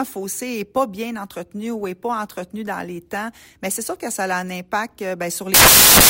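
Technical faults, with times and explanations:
5.54 to 6.10 s, samples built from the wrong bytes: for the last half-second or so, the bytes of each sample get assembled wrongly, whether offset by one, swapped or misaligned. The rapidly changing low-order bits end up as the biggest part of each value, so the audio turns into broadband noise right up to the end.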